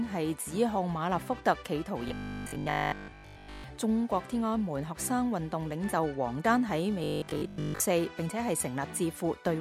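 From 2.08 to 3.64 s, and again from 7.04 to 7.82 s, the sound turns into a rigid, metallic buzz at 50 Hz. This is robotic sound from repeated short buffers. A 20 ms chunk was likely looped while most new audio was skipped.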